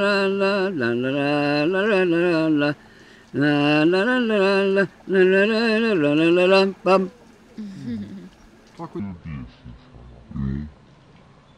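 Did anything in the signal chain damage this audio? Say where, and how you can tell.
Yes. From 9.00 s to the end at 11.58 s there is a section at the wrong speed: the audio abruptly runs at 0.627 times normal, dropping roughly seven semitones and dragging. Pitch and tempo shifting together points to playback at a mismatched clock rate, likely a sample-rate mislabel.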